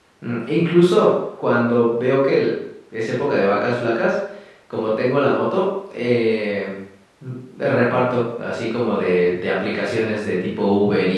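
No technical faults are audible anywhere in the recording.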